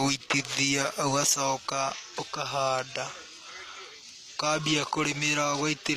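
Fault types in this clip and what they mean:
HE-AAC compression: The speech is likely coded with HE-AAC, at a low rate near 24 kbps. The upper band is rebuilt from copied lower bands. This is plainly audible: s sounds turn gritty and metallic. Nothing remains above 14.9 kHz.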